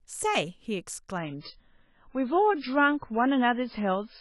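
At 1.18 s the speech switches abruptly to an adaptive stream at a lower bitrate and stays there until the end. The sound fits a fall from roughly 128 kbit/s MP3 to something near 16 kbit/s, likely because the connection slowed. Treble vanishes, leaving a dull, swirly, artefact-laden tone. On a spectrogram the upper band cuts off sharply at that instant, leaving a flat ceiling at 5.3 kHz; the waveform runs on without any gap.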